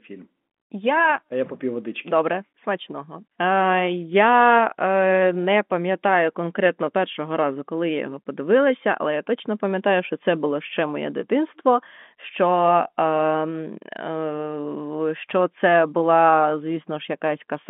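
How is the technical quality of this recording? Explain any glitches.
No glitches or faults are audible in this recording.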